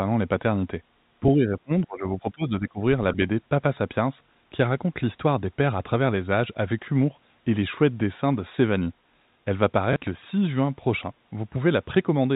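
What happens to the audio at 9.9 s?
At 9.93 to 9.96 s, packet loss with last packet repeated: 30 ms, fitting a single lost packet, is filled by replaying the previous one, giving a small blip rather than a silent gap.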